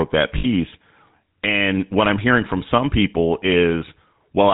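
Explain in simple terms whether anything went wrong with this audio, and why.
Two things went wrong. The whole recording passed through the GSM full-rate codec, an old mobile-phone system that rebuilds speech from a simplified model and throws away everything above 4 kHz. That leaves the voice plainly buzzy, gravelly and muffled throughout.

From 0.38 to 0.46 s, lost GSM frames occurred. A short burst of data, about 60 ms, never arrived, so the decoder kept repeating the last good piece it had. For that instant the voice turns into a rough, metallic ring.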